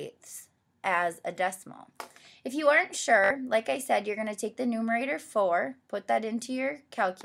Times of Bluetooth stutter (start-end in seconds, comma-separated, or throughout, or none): 3.24-3.30